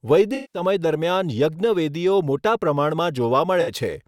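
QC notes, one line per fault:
0.34–0.62 s: AAC frame loss with concealment. About 190 ms of audio drops out. The decoder repeats the last good spectrum, so this patch sounds smeared and noisy.
3.61–3.71 s: AAC frame loss with concealment. A shorter gap of about 60 ms is patched the same way and gives a brief phasey blur.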